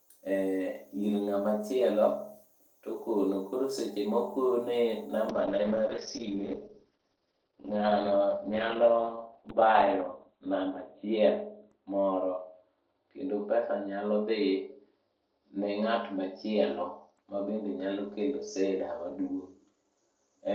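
Speech that suffers a call bitrate drop from 5.31 s to the end of the clip. The sound turns rough and muffled. Its bandwidth collapses from about 20 kHz to 4 kHz, and it sits at its worst for about 4.76 s. The encoder, told by a falling bandwidth estimate to spend far fewer bits, codes more coarsely and discards the high band, which fits a fall from about 32 kbps to 8 kbps. On a spectrogram, energy above 4 kHz vanishes while the rate is at its lowest, leaving a flat ceiling.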